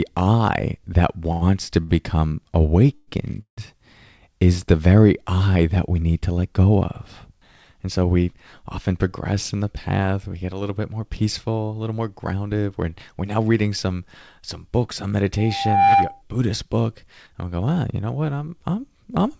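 At 1.32 s, just after "I that", a short stall from a late packet occurs: a packet missed its playout time, the jitter buffer ran dry, and the receiver held the last sound for about 96 ms until the packet arrived. Nothing is lost, but the sound hangs with a faint buzz until about 1.43 s. A second stall from 1.83 to 1.91 s stretches the audio by about 61 ms, with the same brief held quality.

From 2.95 to 3.09 s there is a call audio freeze. The sound stops moving forward and turns into a fading buzzy continuation for about 122 ms, then resumes where it left off. Another freeze from 3.41 to 3.59 s lasts about 161 ms, and most of it, roughly 110 ms, is outright silence after the buzz decays. Packets likely stalled in transit, so each gap adds delay without cutting content.

From 8.92 to 12.41 s a jitter buffer speed-up sets in. The buffer had built up excess delay, so the receiver trimmed out short pitch-period slices over and over, removing about a third of a second in total. 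The speech runs about 8% fast at unchanged pitch and sounds slightly hurried. A shorter burst from 13.10 to 13.39 s, just before "reading some some books", runs about 11% fast and removes a few tens of milliseconds.

At 15.37 s, right after "some some books on", a loudspeaker feedback squeal appears. The microphone is picking up its own loudspeaker, and at 792 Hz the loop gain exceeds one, so that tone feeds on itself. It swells over about half a second into a steady whistle a few dB above the speech and stops at 16.22 s. Throughout the clip, nothing is heard above 8 kHz, which fits a wideband call codec.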